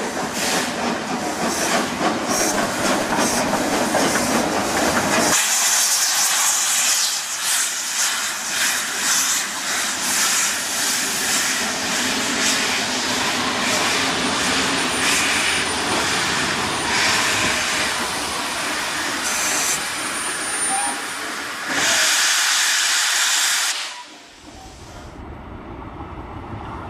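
From 2.39 to 3.59 s come GSM signalling bursts. A nearby 2G phone's radio pulses are rectified, giving galloping ticks and short 217 Hz buzzes, nearly as loud as the sound.

From 3.73 to 5.89 s, GSM phone buzz follows. The phone is now in a call. Its steady 217 Hz bursts produce a hard, raspy buzz, about 17 dB below the sound.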